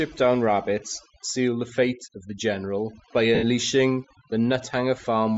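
Speech, and the noise reduction has been pushed way too hard across the whole clip. This is classic overdone noise removal. Any frequency band that sits close to what the tool thinks is noise gets slammed down or cut out entirely, so the gaps between phrases drop to near silence with little twinkling specks left behind. The softer parts of the voice get eaten along with the noise. On top of that there's a grainy, breathy edge on the voice all the way through, and the top end sounds hollowed out and filled with hiss instead of real detail. That's plainly audible codec damage, most likely Bluetooth LC3 compression. Its transform frames fit 10 ms, and the bitrate sounds low, which fits something around 32 kbps. At that rate much of the upper spectrum gets zeroed and replaced with noise fill. Then there are two dropouts from lost LE Audio frames. The first runs from 3.35 to 3.44 s, about 80 ms, which fits eight lost 10 ms frames. 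The second is shorter, from 5.02 to 5.04 s. In both, the decoder keeps replaying the last spectrum with scrambled phase, so the sound turns into a brief noisy smear. Over the longer gap that smear fades as the concealment gives up.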